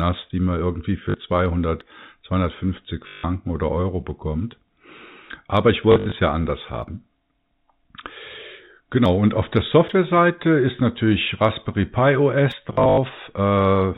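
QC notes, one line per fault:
1.10–1.14 s, packet loss with last packet repeated: 40 ms is missing and the previous packet gets replayed to fill it, giving a quick stutter.
3.08–3.24 s, packet loss with last packet repeated: a solid 160 ms hole filled by looping the same chunk. The repeats don't line up with the pitch period, so it buzzes at about 50 Hz, which fits 20 ms packets.
5.92–6.12 s, packet loss with last packet repeated: 120 ms lost in bits across 200 ms, longest run 60 ms, so you get broken robotic flutter.
12.73–12.97 s, packet loss with last packet repeated: 160 ms lost across 240 ms, longest run 80 ms, with the same buzzy stutter.
1.81 s and 6.83 s, dropped buffer (overrun): a small jump forward, around 20 ms gone with no gap. That's likely the capture side not reading its buffer in time, so it got overwritten.
9.06 s, 9.89 s and 12.52 s, dropped buffer (overrun): the same splice jump, but the skip is bigger, roughly 50 ms.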